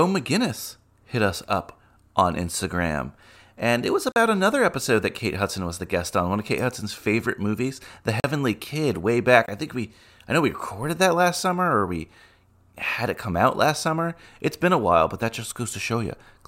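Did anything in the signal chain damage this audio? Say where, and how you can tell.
Yes. The driver or buffer stage let the output run dry three times, leaving a block of digital silence at 4.12 to 4.16 s and at 8.20 to 8.24 s (40 ms each), and a shorter 19 ms gap at 9.46 s. The speech drops straight to silence and returns with no fade. The 40 ms gaps sound like short holes. Abrupt dropouts of this kind point to the output buffer not being filled in time.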